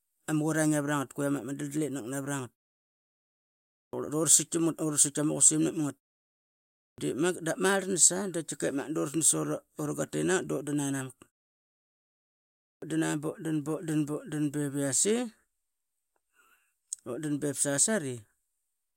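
The output device sleeps during silence and wakes too slowly, producing a clipped start after a pause at 3.83, 6.88 and 12.72 s. After gaps of 1.35, 0.96 and 1.49 s, about 100 ms of speech is swallowed each time, so words begin abruptly without their opening sounds.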